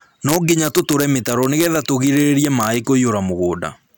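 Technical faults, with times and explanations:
Throughout, integer overflow. The speech is driven about 1 dB past the integer limit, so only a tiny fraction of peaks cross it. Those peaks wrap to the opposite sign instead of being limited. Each jumps across the full range, giving brief, sharp cracks.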